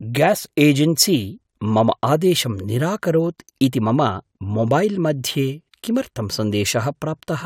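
No technical faults can be heard anywhere in the speech.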